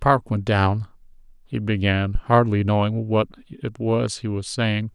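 At 2.15 s the speech is hit by a phantom power thump. A supply was switched on a live input. The voltage step passed through the coupling capacitors. It sounds like a deep thud peaking at about -11 dBFS, decaying within 12 ms.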